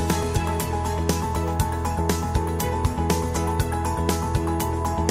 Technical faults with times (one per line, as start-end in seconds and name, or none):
none